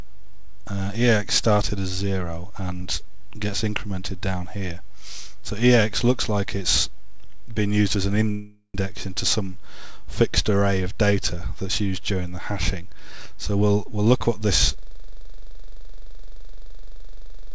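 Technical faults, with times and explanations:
8.31–8.76 s, call audio freeze: the sound stalls for about 0.45 s, smearing the last moment into a fading buzz that drops to near silence for about 70 ms before resuming where it stopped. Nothing is lost, but playback now sits that much later, likely because delayed packets left the jitter buffer empty.
13.55–14.49 s, jitter buffer speed-up: the audio hurries along at about 110% speed with pitch unchanged, as the receiver trims a succession of pitch-period-sized slices, around a tenth of a second in total, to shrink a backlog that had built up in the jitter buffer.
14.78 s to the end, system hang loop: one 42.67 ms fragment repeats exactly and without variation, producing a hard buzz at 23.4 Hz that runs out the clip. That loop length fits a 2048-sample ring buffer being replayed by the hardware while the system or driver stopped feeding it.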